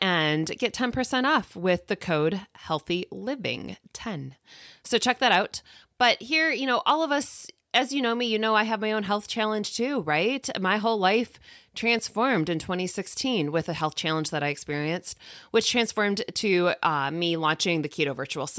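No technical faults are audible.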